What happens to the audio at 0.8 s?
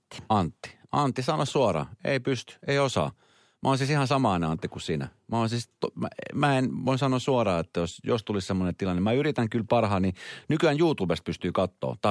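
Nothing goes wrong at 0.8 s; the speech carries on intact through that moment with no dropout, click or distortion.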